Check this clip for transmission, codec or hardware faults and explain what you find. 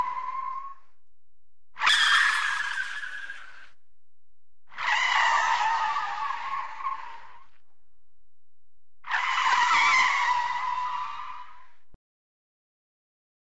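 One fault stands out, a wrong sample rate, from 1.89 to 4.20 s. Through that stretch the sound turns high and hurried, running 1.38 times faster and about 5.55 semitones higher, with pitch and tempo rising together. That locked pairing means the samples are being played back faster than they were captured, with no rate conversion. The 1.38 ratio fits material recorded at 16 kHz being played out at 22 kHz.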